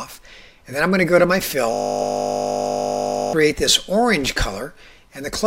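From 1.74 to 3.33 s the sound collapses into a steady 50 Hz buzz: a system hang loop, with one 20 ms buffer replaying about 80 times while the system was frozen.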